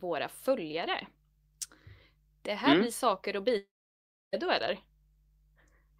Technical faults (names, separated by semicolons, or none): long network dropout